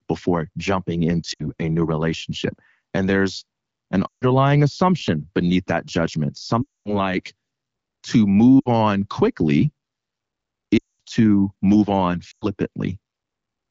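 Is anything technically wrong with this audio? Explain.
Yes, there are lost AMR speech frames at 1.34–1.50, 4.08–4.26, 6.61–6.95, 8.59–8.68, 10.77–11.01 and 12.31–12.46 s. The decoder patched the gaps from the last good frame with falling gain, so the speech drops to near silence, then returns weak or rough. The HD Voice wideband sound between the dropouts is clear.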